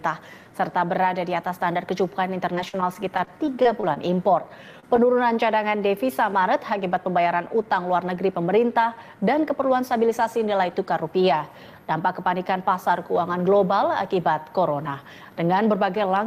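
From 2.55 to 3.98 s there's a burst of repeated packet loss, and it gets that robotic, choppy quality. Roughly a dozen short holes, the longest about 41 ms, each get patched by stretching the previous sound, so pieces go missing.

Then at 4.80 s there's a single short concealed packet loss, about 20 ms that never arrived, smoothed over by continuing what came before and blending back in. You hear it as a quick smear or wobble rather than a clean gap.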